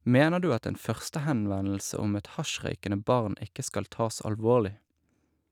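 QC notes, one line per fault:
No faults detected in this clip.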